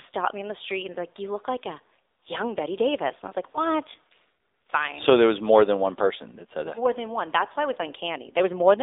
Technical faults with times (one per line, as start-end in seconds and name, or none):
0.00-8.83 AMR narrowband mobile codec